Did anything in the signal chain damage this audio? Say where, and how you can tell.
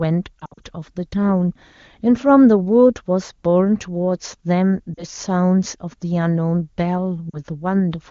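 Yes. Brief dips at 0.40–0.64 s, 4.94–5.04 s and 7.29–7.39 s are lost AMR speech frames: radio errors made the decoder stretch the last good frame at fading gain.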